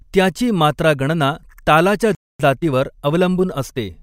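At 2.15 s the speech cuts out abruptly and stays silent for about 0.25 s, a playback stall, likely the player running short of data or its thread being blocked. The waveform shows a flat gap, and the spectrogram shows a clean blank vertical band until 2.40 s.

From 2.40 s to 3.96 s the speech runs hurried at its normal pitch, roughly 1.1 times speed, as time-compressed catch-up trims the backlog by splicing out short pieces. The spectrogram shows harmonics at their usual height but with syllables closer together.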